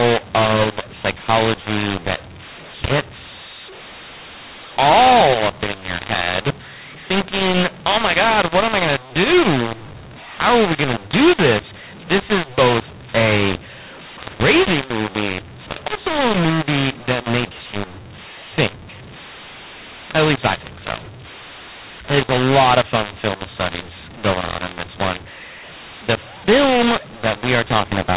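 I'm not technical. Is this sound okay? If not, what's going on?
No. A mu-law and A-law mix-up runs through the whole recording: the speech was stored in one telephone coding (A-law) but played back as the other (mu-law), so loudness levels come out scrambled, making the speech harsh and distorted and filling the quiet gaps with noise.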